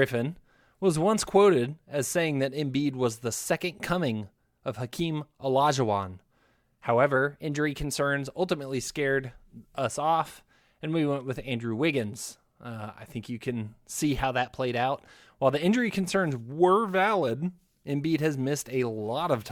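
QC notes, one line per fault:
7.16–8.00 s and 16.54–17.64 s, drift correction step: clock-matching software likely jumped the playback rate, +5.75% just before "ultimately scared us off" and −5.75% after "the injury concerns". Speed and pitch shift together, about a semitone up then down, before snapping back.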